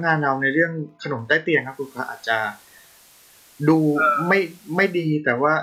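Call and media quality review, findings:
Wi-Fi interference throughout: faint steady ticking about ten times a second, around 45 dB below the speech. Nearby Wi-Fi radio's 102.4 ms beacon rectified in the audio circuit. The exact beacon period, not 217 Hz buzz, rules out GSM pickup.

Digital radio blending to analogue, 1.56 to 5.19 s: 364 ms cross-fade into FM, hiss rising to roughly 30 dB below the speech, level unchanged. Hiss, not codec smearing, separates it from a bitrate drop.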